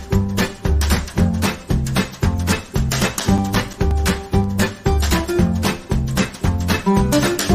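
From 2.49 to 4.44 s there is a burst of CD scratch ticks: twelve regular clicks, roughly six per second, each lasting only a few milliseconds. A blemish on the disc corrupts more data than error correction can repair, once per revolution, so the player conceals or mutes those samples. On a waveform each tick is a brief notch or spike. On a spectrogram it appears as a thin vertical broadband line, evenly spaced across that stretch.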